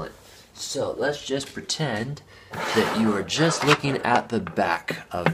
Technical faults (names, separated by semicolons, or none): none